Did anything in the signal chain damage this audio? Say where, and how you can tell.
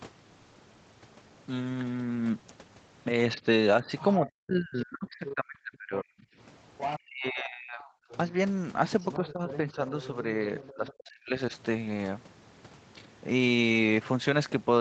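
Yes. Speech suppressed in double talk, from 3.36 to 8.07 s and again from 9.19 to 11.53 s, happens at the call-processing stage. The talker's speech sinks by up to about 40 dB in the first stretch, for roughly three seconds in all, and by about 35 dB in the second, for around a second. The likely cause is an echo canceller that couldn't separate the near talker from loudspeaker echo while both sides spoke, so it attenuated everything together.

Other side's voice leaking through shows up in three places: a short scrap from 3.98 to 4.30 s at about 20 dB below the speech, a brief burst from 5.26 to 5.34 s at about 15 dB down, and a long stretch from 6.78 to 10.92 s at about 10 dB down. That far-end sound, heard under and between the talker's speech, is likely loudspeaker playback that the echo canceller failed to remove from the microphone signal.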